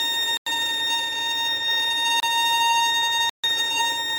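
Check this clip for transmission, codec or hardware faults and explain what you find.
Three blocks of digital silence interrupt the sound, at 0.37 to 0.46 s (about 93 ms), 2.20 to 2.23 s (about 28 ms) and 3.30 to 3.44 s (about 142 ms). Each time, the output buffer went out as zeros, most likely because the program did not fill it before the hardware needed it. The first gap's length fits a 4096-sample buffer. The audio drops straight to dead silence and back with no fade, so each gap is a short hole in the sound.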